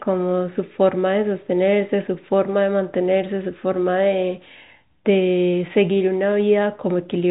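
Speech carried over G.711 telephone coding, with nothing above 4 kHz and the faint quantisation noise that tracks the signal level in that format; no technical faults to report.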